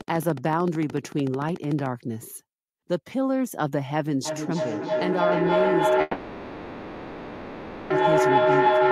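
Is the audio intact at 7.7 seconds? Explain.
No. A feedback howl runs from 4.25 s to the end at 8.91 s. Sound loops between microphone and loudspeaker, grows each pass, and becomes a tone near 1 kHz, pulsing roughly every third of a second and peaking about 7 dB above the speech.

From 6.01 s to 7.92 s the last sound is stretched into a fading buzz or hiss, which is likely a call audio freeze. Delayed packets emptied the jitter buffer, so the receiver filled about 1.89 s and resumed where it stopped, losing nothing.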